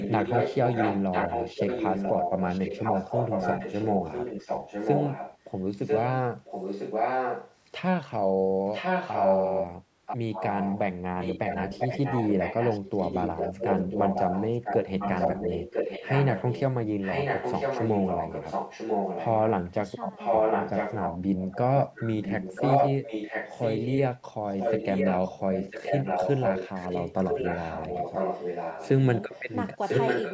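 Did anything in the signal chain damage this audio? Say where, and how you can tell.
Yes. An echo leak runs from 0 to 7.56 s, from 8.66 to 19.51 s, and from 20.17 s to the end. A second copy of the speech arrives about a second (995 ms) after the original, at roughly the same loudness. The likely cause is a loudspeaker on the far end whose echo canceller let its microphone pickup pass back into the call. This is a distinct repeat at a fixed delay, not the smeared, decaying tail of room reverberation.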